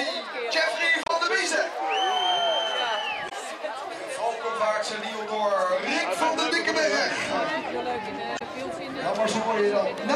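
Three short bursts of damaged data in the compressed stream occur, from 1.03 to 1.10 s, from 3.27 to 3.32 s and from 8.37 to 8.42 s, each lasting roughly 50 to 70 ms. Corrupted bytes make the decoder misread frames and lose sync until it finds a valid header, producing a brief chirp, squawk, click or short hole.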